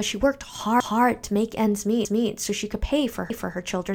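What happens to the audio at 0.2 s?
Nothing goes wrong at 0.2 s; the speech plays through that moment intact, with no dropout, click or distortion.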